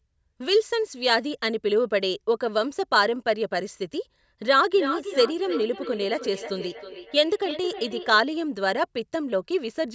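Speech from a call where, from 4.45 to 8.21 s, each word returns roughly every 300 ms as a thinner, ringing repeat, the loudest about 10 dB under the talker. This is feedback echo between two devices: one device replays the other's microphone, which recaptures it, beyond either echo canceller's reach. The call's microphone processing leaves nothing above 8 kHz.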